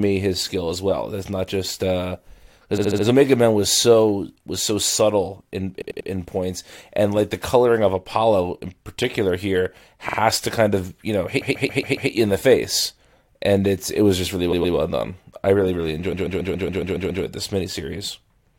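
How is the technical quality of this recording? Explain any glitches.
The recording has a recurring stutter: six bursts of repeated frames, where a short slice of compressed speech plays back-to-back several times before the audio moves on.

1. At 2.77 to 3.04 s, a roughly 70 ms block sounds four extra times.
2. At 5.81 to 6.09 s, after "was so subtle in" and before "points and like the", a 93 ms block sounds three extra times.
3. At 10.08 to 10.17 s, a 46 ms block sounds twice more.
4. At 11.40 to 12.10 s, a 139 ms block sounds five extra times.
5. At 14.51 to 14.75 s, between "it was just really" and "done I really really", a 116 ms block sounds twice more.
6. At 16.12 to 17.23 s, after "done I really really", a 139 ms block sounds eight extra times.

The mechanism is that a run of encoded frames was written or delivered more than once, so the decoder faithfully replays identical material. 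Each repeat plays the same slice again, giving a stutter. Nothing is lost, and the speech is stretched by about 2.7 s in total.

That separates this from dropouts or loss concealment, which remove or smear audio rather than cloning an exact fragment at a steady rate.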